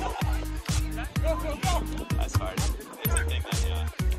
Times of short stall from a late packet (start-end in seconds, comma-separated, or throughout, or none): none